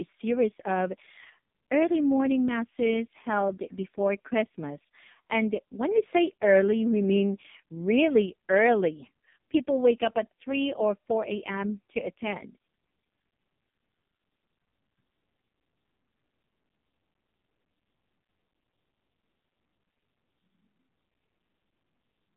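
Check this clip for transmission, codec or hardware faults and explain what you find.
The clip has passed through an AMR narrowband mobile codec for its whole length. The speech was squeezed into a telephone band of roughly 150 Hz to 3.7 kHz, with nothing above 3.6 kHz, and rebuilt from a coarse vocal-tract model fed by very few pulses per frame. The heavy damage points to AMR-NB's lowest mode, around 4.75 kbps. As a result the voice sounds muffled, boxy and noticeably buzzy and synthetic, with its airy upper detail gone.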